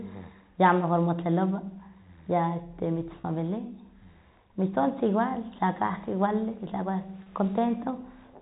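Packet loss with pitch repetition occurs twice, at 3.21 to 3.24 s, just after "ya este", and at 7.23 to 7.26 s. Each gap is about 30 ms, which fits a single lost packet. The receiver fills it by looping the last pitch period of the speech, so each spot sounds like a brief held, slightly buzzy tone before the speech picks up again. The surrounding audio is band-limited by the G.711 telephone coding.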